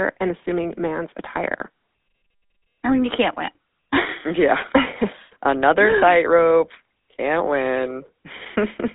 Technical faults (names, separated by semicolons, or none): GSM full-rate codec